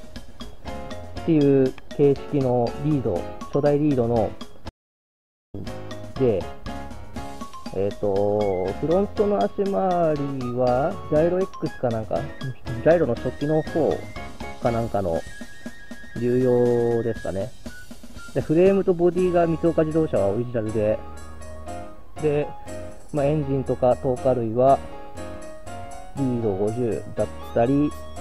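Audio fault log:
4.69–5.54 s, audio dropout to silence: the sound cuts off for about 0.84 s of silence, no room tone. Likely a lost input, with silence written meanwhile.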